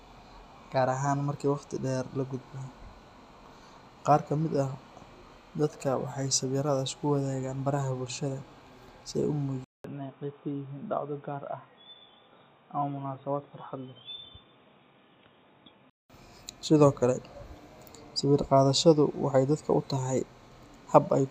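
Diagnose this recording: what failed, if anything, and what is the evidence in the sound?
Input switched to a poorer device, at the driver stage. After "si ay u", 0.2 s of silence at 9.64 s, then dull, boxy speech with nothing above 3.8 kHz, slightly quieter and over new background noise, until 16.10 s. The likely cause is capture moving to a narrowband microphone.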